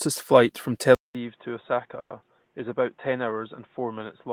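At 0.95 s the recording likely moved to a poorer input device, an input switch. After a silence of about 200 ms the speech returns duller and boxier, with nothing above 3.8 kHz, roughly 5 dB quieter, and a new noise floor sitting around 40 dB below it.

From 1.99 to 2.12 s there is a call audio freeze, likely from packets stalling in transit and draining the jitter buffer. The last sound is stretched into about 110 ms of fading fill that includes roughly 90 ms of silence. The speech then resumes with nothing lost, running about 110 ms later.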